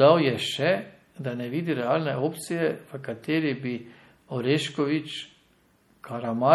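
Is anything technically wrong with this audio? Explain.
Yes, there's plainly audible damage running through the whole speech clip, and it sounds like MP3 compression is the likely cause. The sibilants have that watery, swirly quality with little metallic chirps, and consonant attacks come out smeared. That fits a low bitrate, somewhere around 48 kbps. At that rate the encoder runs short of bits, so it zeroes out weaker frequency lines, which then flicker on and off from frame to frame.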